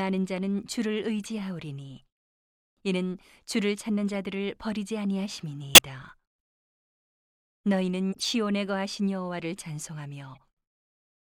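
Damaged compressed frames reached the decoder and were played anyway (corrupt frame decoded). Misread codes threw energy to the wrong frequencies, causing brief chirps and noise bursts at 1.24–1.26, 4.08–4.11, 5.74–5.79 (loudest), 8.13–8.24 and 10.35–10.38 s (faintest).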